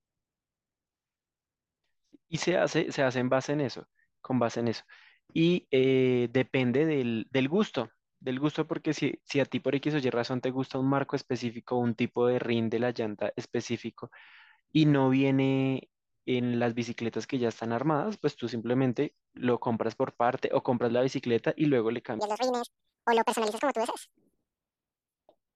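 A speech recording with a section at the wrong speed near the end. From 22.19 s to the close of the clip, playback runs 1.87 times too fast. Pitch rises with it, by roughly ten semitones. The speech turns high, thin and hurried, with both pitch and tempo shifted at once. The likely cause is that this stretch was played or edited against the wrong clock. The jump at 22.19 s is abrupt.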